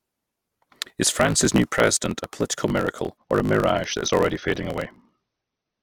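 From the start, the speech carries a block size mismatch (truncated): each block is written longer than the next stage reads, and its tail is discarded. This causes a 54.4 Hz buzz and speech running 1.16 times fast at near-normal pitch, which fits 1024-sample written blocks. The waveform shows small jumps at regular splice points, and the spectrogram shows evenly spaced vertical lines.

At 3.17 s, right after "president a political miracle", the adaptive stream drops to a lower bitrate until the end. This suggests a switch from about 96 to 24 kbit/s AAC. The sound turns smeared and grainy, and there is no gap.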